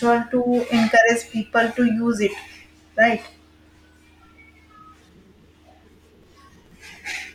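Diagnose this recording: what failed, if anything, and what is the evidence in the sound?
Processor overload crackle, driver/buffer stage, 6.14–6.96 s: gritty tearing from about 15 repeated missed buffers of a few milliseconds replaying stale audio, denser than isolated dropouts.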